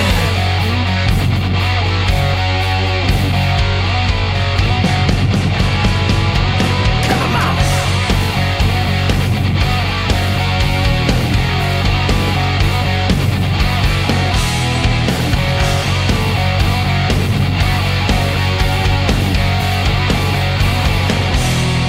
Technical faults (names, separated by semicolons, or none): none